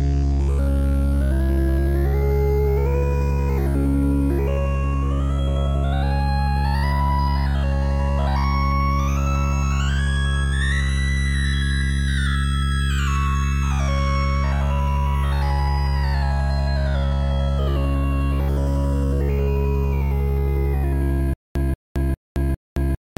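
Stutter with silent gaps from 21.34 s to the end: a 185 ms fragment repeats four times, each followed by about 219 ms of digital silence, a 403 ms cycle. A stalled stream, likely, replaying its last buffer on each retry, loses the intended sound.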